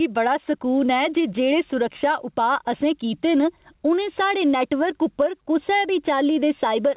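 Throughout the speech there is gain pumping. The gain ducks by roughly 10 dB whenever the voice gets loud, so loud and soft passages sit squashed close together. The likely cause is microphone gain set far too high, with a fast limiter clamping each peak. Unlike a noise gate, the limiter pulls the level down rather than cutting it to silence. The sound sits inside a band that stops near 4 kHz.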